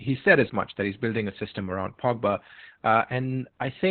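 From start to finish the speech sounds muffled, hoarse and faintly robotic, with nothing above 4.3 kHz: Opus voice compression, which points to a narrowband SILK setting near 8 kbps.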